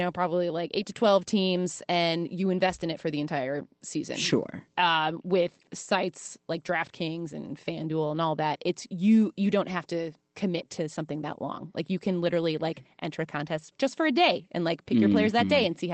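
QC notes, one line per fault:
No fault to note, one line only: the speech comes through the Opus call path at 24 kbps with nothing further to report.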